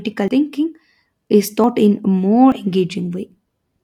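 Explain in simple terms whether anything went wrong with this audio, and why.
The speech jumps ahead at 0.28 s (about 70 ms missing), 1.64 s just before "in a more", and 2.52 s just after "in a more" (about 40 ms each). That is likely a dropped buffer (overrun). Unlike a dropout, there's no silent gap; the sound simply skips forward.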